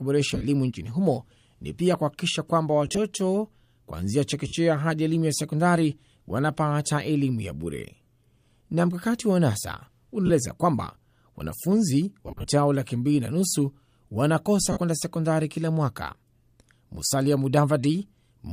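Speech clip with lost LE Audio frames at 0.31, 2.86, 4.48, 8.02, 10.27, 12.27 and 14.72 s. Short bursts of missing Bluetooth frames, from 30 to 150 ms, make the decoder repeat the last spectrum with scrambled phase, so the sound turns into brief noisy smears that fade rather than cut out. Throughout, there is a light grainy edge, likely from LC3 compression.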